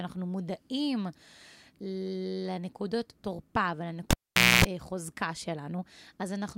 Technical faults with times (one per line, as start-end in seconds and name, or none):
4.11-4.65 cable pulled and plugged in